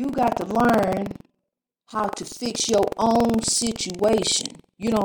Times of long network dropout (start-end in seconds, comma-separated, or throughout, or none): none